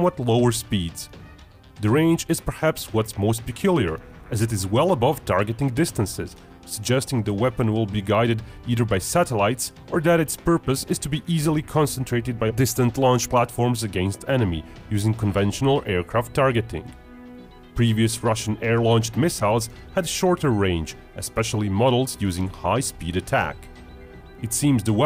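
No technical faults occur at any point, so there is nothing to describe in time order.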